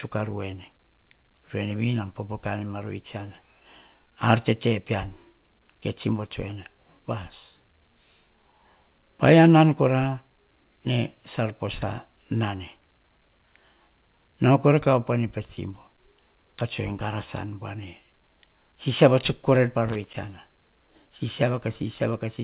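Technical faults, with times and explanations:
3.84–4.07 s and 19.88–20.22 s, loose connector crackle: a worn contact briefly makes and breaks, chopping the sound into irregular scratchy bursts, seen as ragged waveform spikes and broadband vertical streaks stopping at the call path's 4 kHz ceiling.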